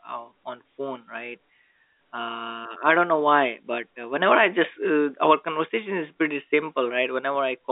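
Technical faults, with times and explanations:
No technical faults are present; the signal shows the ordinary G.711 A-law telephone band of 250 Hz to 3.7 kHz, with nothing above 3.8 kHz, as expected of a 64 kbps phone line.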